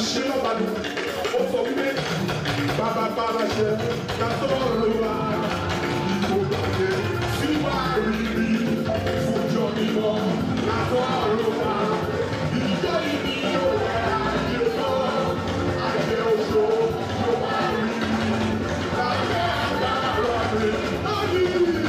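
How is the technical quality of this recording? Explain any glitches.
Nothing here needs explaining: there are no glitches anywhere in the recording.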